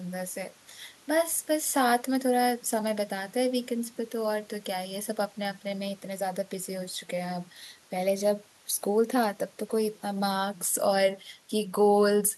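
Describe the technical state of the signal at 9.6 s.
At 9.6 s the speech signal is intact, with no audible fault at that moment.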